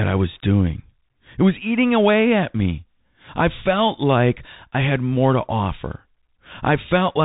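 Throughout, Bluetooth CVSD headset coding: one-bit slope tracking, consistent with 64 kbps, leaves a grainy hiss and scratchy s sounds, with a spectrogram showing nothing above 3.8 kHz.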